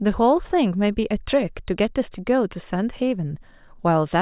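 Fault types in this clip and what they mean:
No technical faults can be heard anywhere in this speech recording. There is nothing in the audio to list under any fault type.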